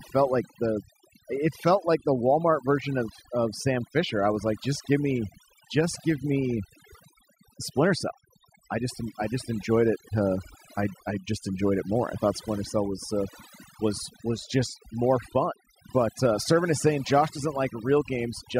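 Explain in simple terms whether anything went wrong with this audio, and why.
A noise reduction tool was applied far too strongly here, so this speech recording suffers from overdone noise removal from start to finish. The tool decides which slices of the sound look like background noise and turns them almost completely off, but it also grabs the quieter parts of the speaking voice. The result is a background that drops and breaks up into little twinkling, warbling specks.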